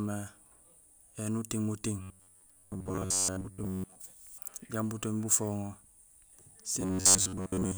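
Speech, where audio likely arrived too seldom, so roughly 11 ms chunks repeat: robotic sound from repeated short buffers, a rigid 93.8 Hz buzz from 2.02 to 3.97 s, after "éni uting muting", and from 6.81 s to the end.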